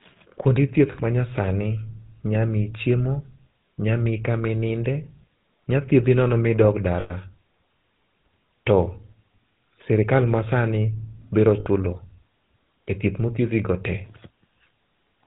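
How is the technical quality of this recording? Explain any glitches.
The technical quality is poor: the whole recording carries plainly audible codec coloration, and three short dropouts interrupt the speech.

GSM full-rate codec runs through the entire clip. This early mobile codec models the vocal tract and drives it with a coarse, regularly spaced pulse excitation, and it passes nothing above 4 kHz. The damage is plainly audible as a buzzy, gravelly roughness over the speech with no high-frequency air. The sound matches a 13 kbps GSM full-rate channel.

Lost GSM frames occur at 0.92 to 0.95 s, at 7.0 to 7.12 s just after "thiedhi nono ma idog", and at 11.6 to 11.67 s just after "sirikal masani biro". When a frame is missing, the decoder repeats the last good frame's settings. Each gap is therefore held as a brief rough, metallic ring rather than silence. The gaps last about 20 ms, 100 ms and 60 ms, which fits one, five and three lost 20 ms frames.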